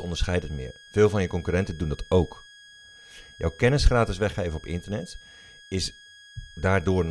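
A switching supply whistle runs throughout the speech: a thin tone near 1.65 kHz, about 25 dB below the speech, drifting slightly as the supply's burst mode shifts.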